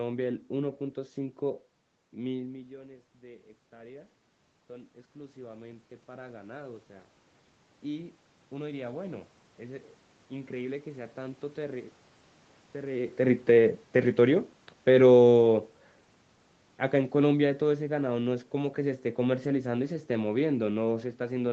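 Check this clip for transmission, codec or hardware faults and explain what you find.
One fault appears twice: automatic gain rising, from 2.37 to 7.17 s and again from 8.5 to 11.96 s. Around 2.5 s the voice drops by about 17 dB as the talker moves away. The gain control finds the input too quiet and slowly adds about 8 dB, then a further 4 dB later. Unlike a talker simply coming closer, the room noise swells along with the voice over several seconds, which marks it as an automatic gain change.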